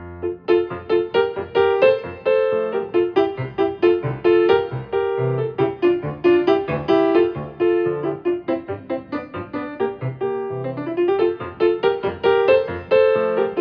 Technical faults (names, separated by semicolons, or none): none